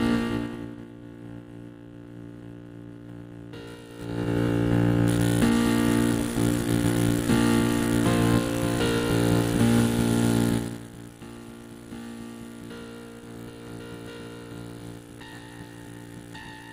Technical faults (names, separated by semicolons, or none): zipper noise